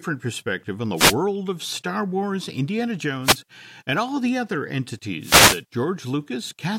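Wireless microphone noise hits occur at 0.96–1.15 s, 3.22–3.39 s and 5.2–5.63 s. The radio link fades, so receiver static briefly swishes over the speech, visible as broadband vertical smears on a spectrogram.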